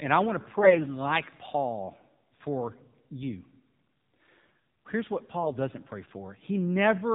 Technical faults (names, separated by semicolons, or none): AMR narrowband mobile codec; AMR bit errors